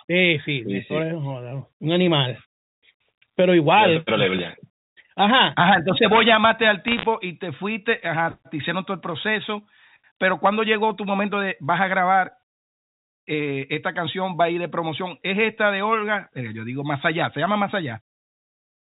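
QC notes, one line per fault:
6.88–7.06 s, bit errors on a digital phone line: flipped bits in the mu-law stream, under one percent, corrupt single samples, causing sharp ticking crackle over intact speech.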